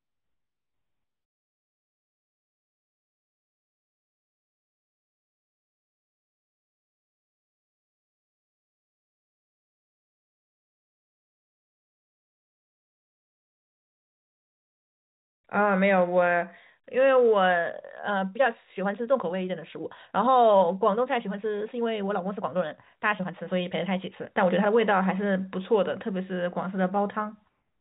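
Speech from 18.01 to 24.71 s suddenly rushes at about 1.48 times normal pace while pitch holds steady, likely a time-stretched section squeezed by dropping short pieces. The band-limited sound, with nothing above 4 kHz, fits a G.711 A-law call path.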